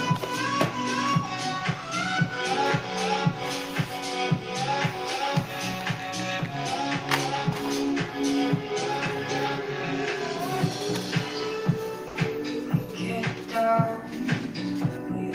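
At 12.07 s the sound cuts out for 80 ms and returns at 12.15 s. This is sound dropped by the voice detector. The gap is filled with comfort noise. The likely cause is that the sender's voice detector judged this stretch to be background and paused transmission, which fits Opus discontinuous transmission. When the detector fired again, the sound came back.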